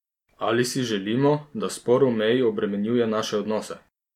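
No technical faults are audible.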